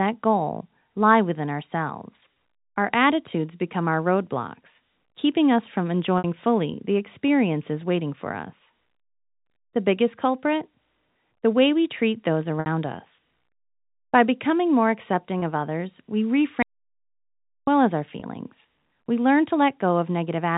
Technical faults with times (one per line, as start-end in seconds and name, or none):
2.34-2.36 packet loss with pitch repetition
6.18-6.24 packet loss with pitch repetition
12.60-12.66 packet loss with pitch repetition
15.40-15.42 packet loss with pitch repetition
16.63-17.67 audio dropout to silence
18.20-18.22 packet loss with pitch repetition